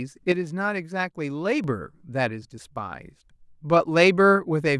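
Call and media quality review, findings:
Sudden gain jump at 0.32 s. Speech and background noise drop together by about 6 dB, then return abruptly at 1.64 s. No ramp at either edge. Likely a digital gain setting or bit shift applied instantly, without smoothing.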